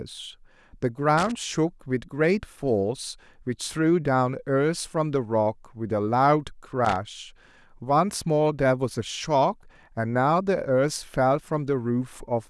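A worn or dirty contact in the signal chain is making and breaking as it moves, producing loose connector crackle in this speech. From 1.18 to 1.32 s and again from 6.85 to 6.96 s, the chopped signal comes through as short, irregular bursts of scratchy crackle.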